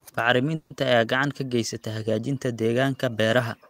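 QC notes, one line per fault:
0.55–0.73 s, call audio freeze: the sound stalls and its last moment is stretched into a fading buzz for about 150 ms, likely from delayed packets emptying the jitter buffer. Nothing is lost, and everything afterwards arrives 150 ms late. A spectrogram shows flat, smeared horizontal bands; the waveform shows a decaying, featureless stretch.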